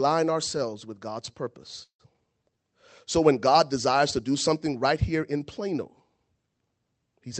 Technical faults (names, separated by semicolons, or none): call audio freeze; short concealed packet loss; jitter buffer slow-down